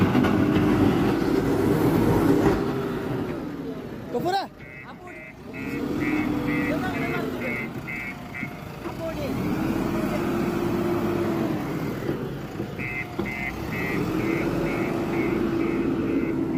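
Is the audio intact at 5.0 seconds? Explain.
Yes, the audio is intact at 5.0 seconds, with no dropout, click, distortion or other fault at that moment.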